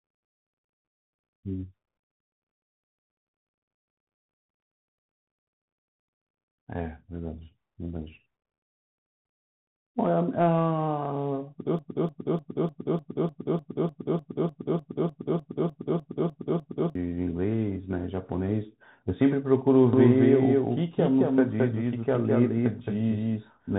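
Across the whole clip the speech is squeezed through a Bluetooth CVSD headset codec. Nothing above 3.8 kHz survives, so the sound is narrow and telephone-like. The one-bit delta coding, whose grain fits a 64 kbps link, leaves a plainly audible granular hiss under the voice and scratchy, overloaded sibilants. Unlike a simple low-pass or a generic low-bitrate codec, the roughness tracks the signal's slope: loud, bright moments distort most, because the adaptive step cannot climb fast enough.

From 11.79 to 16.95 s a broken-record loop takes over. A fragment about 0.3 s long repeats exactly, back to back, 17 times, and the speech that should have filled those five seconds never arrives. The likely cause is a stalled player or stream that kept resending the last buffer it held. What marks it apart from an echo or a stutter is that each repeat is identical and at full level, with no decay and no progress.

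At 19.93 s a doubled audio track begins and runs to the end. A second full-band copy trails the original by about a fifth of a second at roughly the same loudness, likely from a slower second capture path mixed in alongside the first. It switches on abruptly and carries no room colour or fading tail, which separates it from reverberation or acoustic echo.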